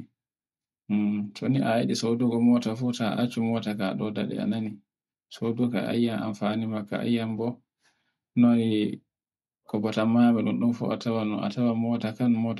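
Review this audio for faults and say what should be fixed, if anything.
From 1.87 to 3.87 s the speech turns thin, bright and hissy with sharp sibilants: pre-emphasis left on, a CD-style 50/15 µs treble lift of about 8 dB at 10 kHz never de-emphasised. Apply the matching de-emphasis curve on playback or import, so any pre-emphasis flag is honoured throughout.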